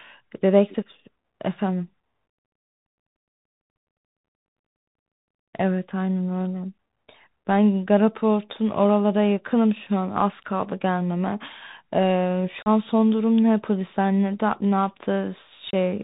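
From start to finish the speech sounds narrow and gritty: nothing comes through above about 4 kHz, a granular hiss sits beneath every phrase, s sounds turn scratchy, and louder bright syllables break up. That is the Bluetooth CVSD headset codec, plainly audible here. It encodes only one bit per sample, a single up-or-down step whose size adapts, which fits a 64 kbps link. Fast, loud high-frequency movement outruns the step, so those moments distort while quieter passages carry steady grain.

At 12.63 s the speech drops out for about 37.5 ms, and at 15.71 s for about 26.2 ms. Both holes have abrupt edges and the sound returns quieter for an instant. This is unconcealed Bluetooth headset packet loss. Short voice packets between headset and phone went missing, around ten in the first gap and around seven in the second, and nothing smoothed over them. Silence or idle filler took their place, leaving hard cuts.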